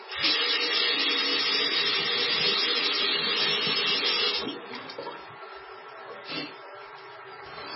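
A starved encoder, likely MP3 compression at a very low bitrate near 15 kbps, runs throughout. Short of bits, it cuts everything above 5.6 kHz and drops weak frequency lines frame to frame, leaving the sound dull, heavily watery and swirling, with smeared attacks.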